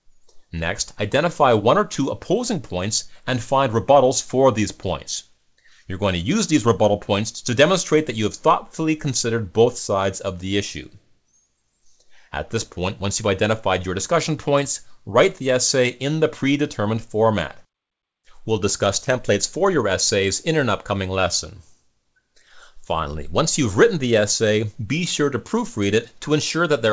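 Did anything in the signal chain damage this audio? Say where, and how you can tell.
No, nothing stood out on listening; the audio came through a call path whose band stops at 8 kHz, as that path's wideband coding would leave it.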